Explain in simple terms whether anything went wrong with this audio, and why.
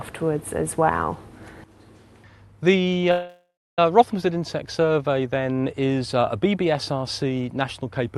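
At 3.11 s the sound stalls until 3.79 s: a call audio freeze, likely from delayed network packets. The receiver stretched the last sound into a fading buzz or hiss, silent for about 0.29 s, then resumed where it stopped. Nothing is lost, but everything afterwards arrives later.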